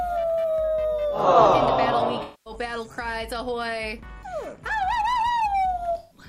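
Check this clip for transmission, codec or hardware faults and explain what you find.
Two patches of AAC frame loss with concealment are present. The first runs from 2.22 to 2.53 s, the second from 5.98 to 6.18 s. Encoded frames went missing, about 0.23 s of audio, then 0.13 s. That fits runs of roughly eleven and six frames. The decoder patched each gap by reusing the last good spectrum. Both spots come across as a smeared, noisy or phasey patch.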